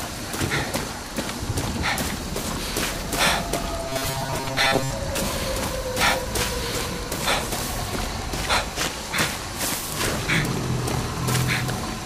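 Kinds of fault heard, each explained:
Robotic sound from repeated short buffers: 3.90 to 4.91 s becomes a fixed 134 Hz metallic buzz, likely a 7.5 ms buffer repeated; unlike distortion, most original sound is lost.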